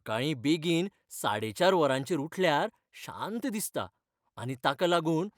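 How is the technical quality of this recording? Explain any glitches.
Nothing stood out on listening to this recording, with no glitches to explain.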